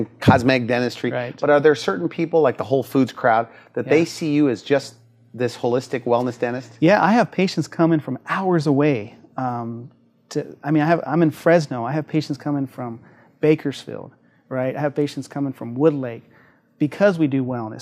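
No audible technical faults.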